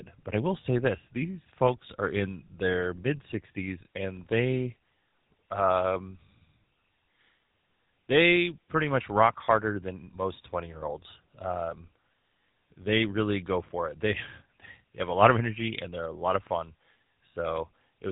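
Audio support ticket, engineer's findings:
GSM full-rate codec damage across the whole speech clip. Plainly audible buzzy, gravelly roughness. Nothing above 3.9 kHz. The codec models the vocal tract and drives it with regularly spaced pulses, discarding most of the excitation detail. The result is that rasp. The band limit and texture fit a 13 kbps GSM full-rate path.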